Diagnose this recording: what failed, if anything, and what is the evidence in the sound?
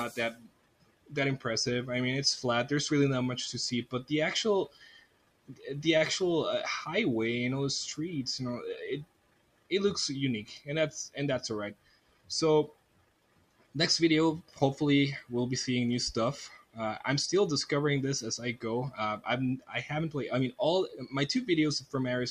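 In call processing, a noise suppressor built for speech was left running on this audio, treating its steady content as noise. Levels swing by around 15 dB, and the sound cut by the noise suppressor sinks by about 12 to 18 dB in dips starting at 0.34, 4.68, 9.04, 11.74, 12.68, 14.42, 16.49 and 20.88 s.

On the network side, a short stall from a late packet emptied the jitter buffer at 5.97 to 6.03 s. The receiver held the last sound for 32 ms until the packet arrived, so nothing is lost, but the sound briefly hangs and then resumes, slightly delayed.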